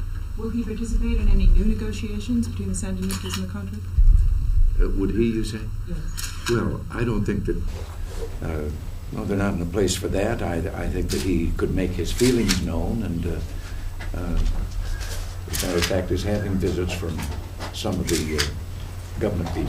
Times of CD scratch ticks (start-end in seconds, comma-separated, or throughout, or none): none